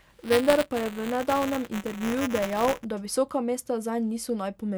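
From the start to 2.85 s, just before "da visoka", the speech carries buffer tearing: writer and reader of the playback ring buffer are crossing mid-period, so a small slice of each buffer replays audio from about 15 ms earlier, joined hard on both sides. The result is a steady robotic rattle at 188 Hz, which fits a 256-sample buffer. Unlike random crackle or dropouts, it keeps a fixed rate and follows the signal.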